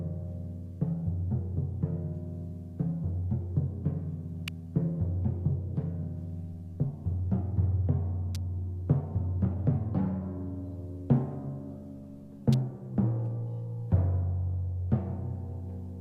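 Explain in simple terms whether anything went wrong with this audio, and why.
Three sharp snaps stand out, at 4.48, 8.35 and 12.53 seconds. These are electrical switching spikes, likely from a nearby switch or motor sparking into the audio line. Unlike a dropout, no sound goes missing; each snap lands on top of it.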